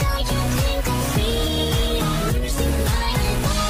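At 1.30 s the call's bandwidth estimate falls and the encoder is forced into a call bitrate drop. The sound turns coarse and muffled, highs trimmed away, which fits a fall from roughly 48 to 15 kbps, bottoming out for about 1.46 s and not recovering by the end.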